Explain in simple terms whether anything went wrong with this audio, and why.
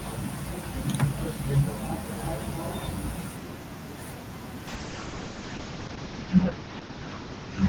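Yes. From about 4.68 s to the end of the clip, the sound suffers a call bitrate drop. The call's connection estimate fell, so the encoder had far less data to describe the sound. It coded everything more coarsely and cut off the top end above about 8 kHz, leaving the audio muffled, rough and watery. It stays at its worst for roughly a second. Unlike dropped packets, there are no gaps or stutters, only a loss of quality.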